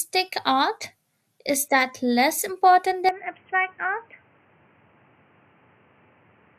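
Speech runs the whole way through with a dull, gurgling, granular texture, as upper sub-bands drop in and out and the remaining ones are coarsely quantised. That is likely MP2 compression at a low rate, around 80 kbps, and its steady grit sets it apart from the smeared, watery swirl of transform codecs. At 3.09 s the input likely switched to a poorer device: with no gap, the sound turns boxy, loses everything above 3.2 kHz, drops by roughly 5 dB, and gains a new noise floor about 30 dB down. Unlike the codec's constant dullness, this is a sudden, lasting step in tone and level.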